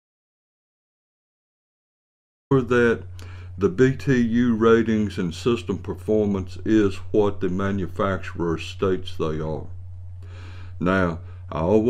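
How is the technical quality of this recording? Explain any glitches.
The main problem is an audio dropout to silence at the very start. From 0.0 s, already under way when the recording begins, to about 2.51 s the clip holds silence, with no room tone or hiss, before sound arrives abruptly. The input was most likely lost for that stretch, so silence was written instead. On a waveform this is a flat line; a spectrogram shows a dark band before energy begins.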